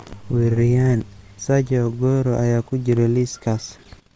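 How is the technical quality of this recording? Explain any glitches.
No audible technical faults.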